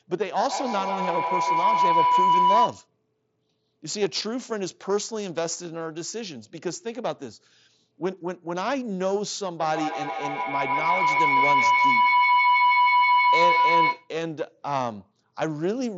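Speech carries two bouts of feedback howl, 0.47–2.9 s and 9.6–14.15 s: a second device's loudspeaker is re-entering the microphone, so the loop builds a tone near 1 kHz that pulses roughly every 150 ms and peaks about 7 dB above the speech, over a headset path cut off near 7.7 kHz.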